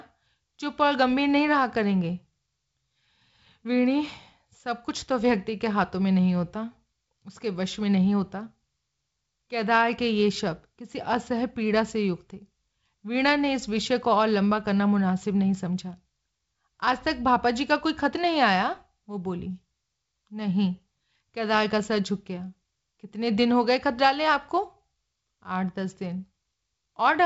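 No technical faults are present in this speech recording, which has passed through G.722 wideband telephone coding at 56 kbit/s, leaving nothing above about 7.7 kHz and only the light graininess that this coding rate brings.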